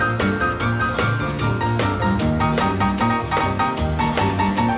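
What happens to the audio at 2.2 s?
Nothing goes wrong at 2.2 s: the audio passes through intact, with only the steady 4 kHz band limit of the G.711 call path that runs throughout.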